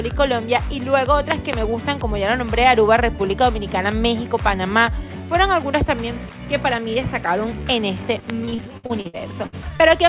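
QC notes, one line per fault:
1.32–1.55 s and 8.30–8.32 s, loud pop: the first range holds two sharp pops in quick succession, the second a single one, each peaking around 20 dB above the surrounding sound. The likely cause is a voltage step or pulse, such as a plug, switch, static discharge or driver glitch, that the downstream circuits shaped into a brief thump. Unlike a dropout, the underlying sound carries on uninterrupted beneath each pop. Something was added on top of it, and nothing was lost.
8.45–9.82 s, repeated packet loss (robotic sound): ten separate holes open in the audio, the longest about 60 ms, totalling 360 ms missing. Roughly a quarter of the stretch is filled by extending the last received sound into each gap, which gives the choppy, robotic texture. This differs from the pops because the original sound is actually replaced rather than overlaid. The holes recur over more than a second instead of landing as one event. 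Throughout, nothing is heard above 4 kHz, consistent with a narrowband call codec such as G.711.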